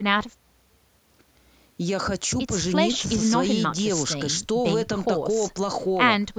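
No technical faults are audible.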